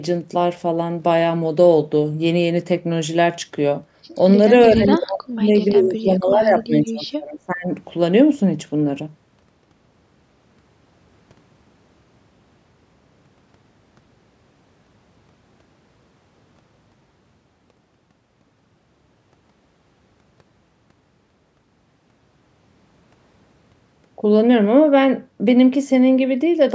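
An echo canceller likely mistook double talk for echo and clamped the speech, which drops sharply from 4.69 to 5.55 s, by roughly 40 dB, then sags again from 5.75 to 7.7 s, by roughly 25 dB.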